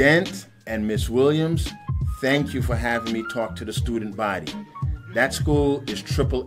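No technical faults can be heard in this audio.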